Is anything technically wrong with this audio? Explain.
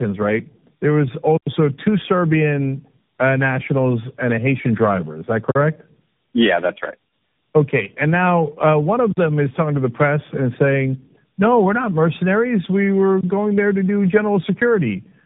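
Yes. Tandem speech coding runs throughout. The speech passed through three speech codecs in a row, and each one re-coded the previous one's errors. Nothing reaches above 3.8 kHz, and the roughness and warble go beyond plain band-limiting or any single narrowband codec.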